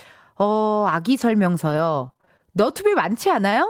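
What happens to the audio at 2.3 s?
At 2.3 s the speech is inside a stretch of scattered short gaps from 1.17 to 2.93 s. About seven small packet losses, none longer than roughly 20 ms, were patched by extending the preceding sound, leaving brief ticks and smears rather than one silent dropout.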